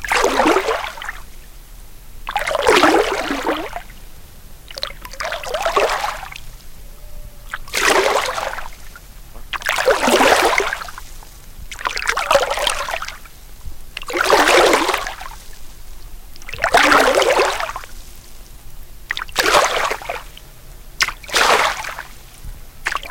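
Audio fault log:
throughout, hard clipping: overdriven by about 15 dB, peaks are cut flat on a small fraction of samples, adding harmonics far up the spectrum.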